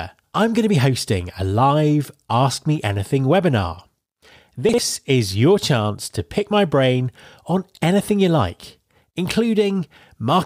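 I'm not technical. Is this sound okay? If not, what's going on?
No. From 4.69 to 4.78 s, just before "is your chance to", there are chunks out of order: a 46 ms piece plays one slot late, so the speech briefly jumbles.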